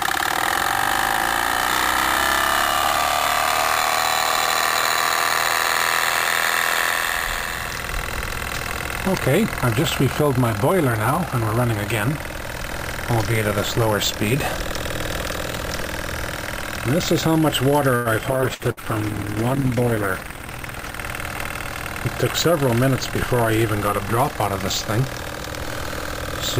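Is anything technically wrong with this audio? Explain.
Yes. The audio has a cluster of network and jitter-buffer faults between about 18 and 21 seconds.

At 17.95 to 18.08 s there is a short stall from a late packet. A packet missed its playout time and the jitter buffer ran dry. The receiver stretched the last sound for about 100 ms until the packet arrived, then carried on from the same point. Nothing is lost, but the sound hangs briefly with a slight buzzy sustain, and playback runs about 100 ms later afterwards.

From 18.33 to 21.07 s there is a call bitrate drop. The bandwidth estimate collapsed and the encoder went from 128 kbps down to 14 kbps, staying at the floor for about 2.7 s. At that rate Opus quantises far more coarsely and gives up the upper spectrum. The sound becomes muffled and watery, with less air and detail, until the bitrate recovers just after 21 s.

At 18.41 to 18.45 s there is a skip ahead. 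With later audio already queued, a stretch was dropped, cutting roughly 70 ms and pulling latency back by about 50 ms. Playback jumps forward with almost no gap. The material on either side is spliced nearly directly, so a small piece of the sound simply vanishes.

Two bursts of packet loss follow, at 18.54 to 18.62 s and 18.71 to 18.80 s. Each burst loses about 60 ms of audio. The receiver concealed each loss by extending the last sound for roughly 50 to 55 ms and fading it as the gap went on. The result is a short held, decaying buzz or hiss, and then the audio resumes further along with the lost portion gone.

At 20.16 to 20.41 s there is a jitter buffer speed-up. The buffer was holding more audio than its target, so the receiver removed short pitch-period segments repeatedly, about 40 ms in total. Over this quarter second, playback runs at about 113% speed with unchanged pitch, and the sound comes across as briefly hurried or rushed.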